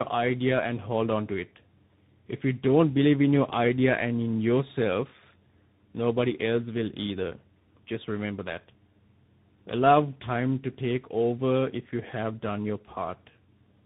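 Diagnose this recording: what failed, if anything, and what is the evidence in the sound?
Tandem speech coding runs throughout the clip and sits at the codec stage. The speech is rough, muffled and warbly, and nothing is heard above 3.8 kHz. The roughness and warble point to two lossy speech coders in a row, which fits G.729A at 8 kbit/s, then G.711 mu-law, then CVSD. At each link boundary the audio was decoded and re-encoded, so each coder worked on its predecessor's damage and the errors accumulated.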